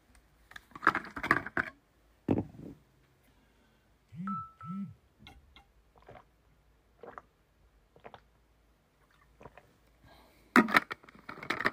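Two sharp, isolated clicks cut through the sound, one at 1.30 s and another at 6.19 s, each showing as a thin vertical line across the spectrum. Both are likely dropped samples: a fraction of a millisecond of the stream goes missing, so the waveform leaps straight from one value to a later one. That gap is far too brief to remove anything audible. Only the abrupt step itself is heard, as a click.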